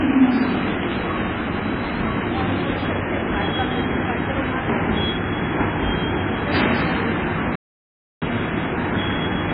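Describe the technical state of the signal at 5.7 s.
MP3 compression at 5.7 s, as throughout the whole clip, is the likely cause of what is heard here. Short of bits, which fits a rate around 16 kbps, the encoder cuts the treble at a fixed frequency and drops weak frequency lines that flicker between frames, leaving dull, heavily watery, swirling audio with smeared attacks.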